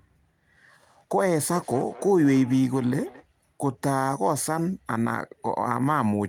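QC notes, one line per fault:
1.54–3.27 s: feedback echo between two devices. The speech returns about every 200 ms, peaking at about 19 dB below it, as a second device's playback re-enters the microphone.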